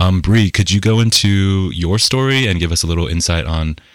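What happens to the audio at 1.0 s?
At 1.0 s the louder moments of the speech carry a gritty crackle on their peaks. This is hard clipping, present throughout the clip: the signal is driven about 8 dB past what a stage can pass, so a small fraction of peaks are sliced flat, adding harsh high harmonics.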